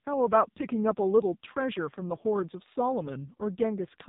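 From start to finish this speech has been through the AMR narrowband mobile codec, and it's squashed hard. Everything above 3.8 kHz is simply gone, so it has that dull phone-line feel. The codec rebuilds the voice from a vocal-tract model fed with a handful of pulses per short frame. With damage this heavy, that points to one of the lowest modes, around 5.9 kbps, and the speech comes out buzzy and noticeably synthetic throughout.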